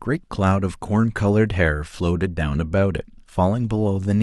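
A speech recording with nothing technically wrong with it.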